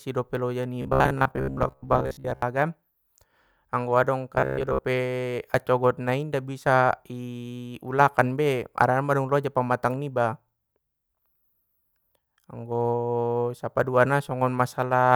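Robotic sound from repeated short buffers at 0.82–2.42 s after "dope loja" and 4.35–4.85 s after "anggo adong": a rigid 66.8 Hz buzz, likely from looping roughly 15 ms chunks while missing audio is skipped.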